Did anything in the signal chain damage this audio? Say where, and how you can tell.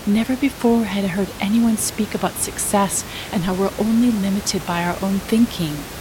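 No, nothing in the signal chain has damaged this speech recording; the only thing underneath it is the room's own background noise, sitting about 14 dB below the speech, which was captured at the microphone rather than added by any later stage.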